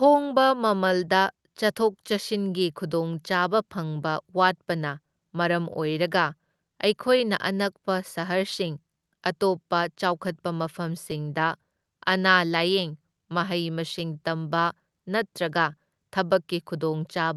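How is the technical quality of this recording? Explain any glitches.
The recording has timing problems throughout and a short cluster of dropout repairs, heard through an Opus call path whose audio stops at about 12 kHz.

Clock drift between sender and receiver runs through the whole clip. The sending device's clock appears to run about 4% slower than the receiving device's, so audio arrives slightly slower than it is played out and the jitter buffer keeps running low. This differs from network trouble because the error is steady and one-directional. The problem never resolves itself, so the receiver has to keep correcting for it.

The repeated timing corrections are how that drift becomes audible, from 0.21 s to 16.91 s. To avoid running empty, the receiver repeatedly stretches or repeats small pieces of speech, so playback runs at about 96% of natural pace and gains roughly 0.7 s overall. 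You hear this as a faintly dragging, slightly uneven tempo with occasional small hiccups. These edits are spread across the entire clip and all push the same way, which tells them apart from packet loss.

Scattered short gaps occur only between 5.73 s and 8.02 s. About seven packets went missing or arrived late here, one at a time. The receiver covered each hole by continuing the last sound, concealing only a few tens of milliseconds in total, with no single gap longer than about 10 ms. The result is a few brief ticks or smears in that stretch. Unlike the drift corrections, these are local, random losses rather than a steady pull on the tempo.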